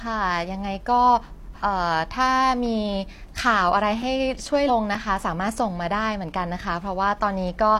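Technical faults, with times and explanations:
1.58 s and 4.65 s, compressed frames skipped: the speech jumps ahead by about three and then two 46.4 ms frames, with no audible gap.
4.02 s and 4.95 s, block of digital silence: 5.33 ms of output drops out, which fits an unfilled 256-sample buffer, giving a brief tick or dip from the abrupt edges without skipping ahead.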